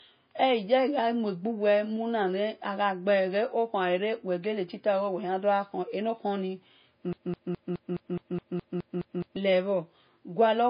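The clip is speech. Nothing is heard above about 5.1 kHz, with smeared low-bitrate MP3 artefacts, likely low-bitrate audio saved at a high bitrate, fitting roughly 24 kbit/s. From 7.13 to 9.36 s, a broken-record loop repeats one 0.21 s fragment eleven times. The stream likely stalled and resent its last piece, and the audio meant for that span is lost.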